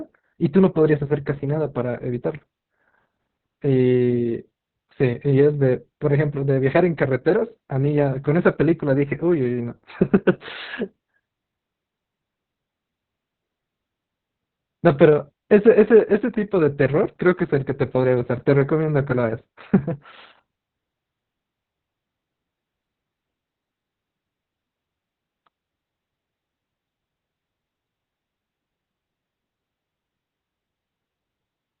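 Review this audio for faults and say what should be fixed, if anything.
Opus voice compression runs through the whole clip. The speech is confined to a narrowband channel with nothing above roughly 4 kHz, so consonants lose their edge and the voice sounds muffled. The excitation is coded coarsely by the SILK linear-prediction layer, giving a hoarse, slightly robotic quality throughout. The heavy damage points to a very low bitrate, around 6 kbps, and long frames of about 60 ms. To prevent this, encode at a higher bitrate, such as 24 kbps or more, so Opus keeps wideband or fullband audio.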